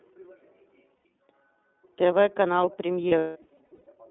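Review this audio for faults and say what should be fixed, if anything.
The iLBC codec colours the whole clip. Speech is held to about 200 Hz–3.6 kHz and sounds slightly rough and synthetic, which fits its 13.33 kbps, 30 ms-frame mode, unlike plain band-limiting.

Lost iLBC frames occur at 0.96–1.05 s (90 ms) and scattered across 3.09–3.87 s, with the longest gap around a fifth of a second. The decoder repeats the last pitch cycle mixed with noise, so these sound like held, buzzy vowels rather than silent dropouts, and clean speech returns at once.

To prevent both, switch to a wideband codec and protect the stream with forward error correction or packet redundancy.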